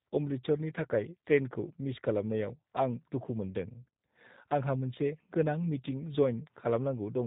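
From start to finish the speech has been carried through the G.729 codec, and the plainly audible damage suggests the lighter G.729A variant at a rate consistent with 8 kbit/s. Instead of sending the waveform, the codec rebuilds each 10 ms frame from a vocal tract filter, a pitch predictor and a few pulses, with nothing above 4 kHz. The speech stays intelligible but sounds dull, slightly rough and synthetic throughout.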